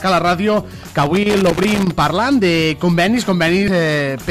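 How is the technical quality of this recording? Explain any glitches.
The recording has two glitches.

From 1.03 to 1.91 s there is loose connector crackle: a worn contact making and breaking chops the signal into irregular scratchy bursts, seen as ragged spikes and vertical streaks.

From 3.65 to 3.68 s there is damaged data in a compressed stream: the decoder loses sync and produces a brief glitch, leaving a short smeared blotch and a waveform discontinuity.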